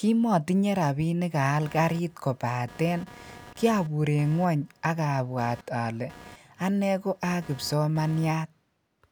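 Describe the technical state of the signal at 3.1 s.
Computer activity noise runs from 1.62 to 8.31 s: processor load shifts the shared audio ground, adding a buzzing chirp pulsing near 200 Hz, roughly 25 dB below the speech.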